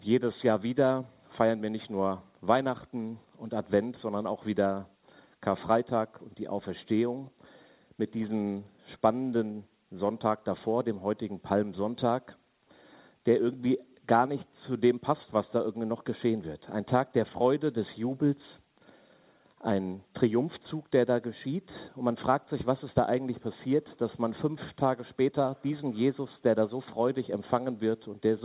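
No technical faults occur at any point in this audio, which reaches the listener through a WebRTC call path using G.711 A-law at 64 kbps, so nothing is heard above 4 kHz.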